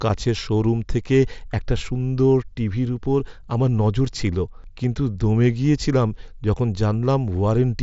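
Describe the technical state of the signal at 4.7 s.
At 4.7 s the speech comes through intact, with nothing beyond the light graininess and limited 8 kHz bandwidth of the Bluetooth mSBC headset codec it passes through.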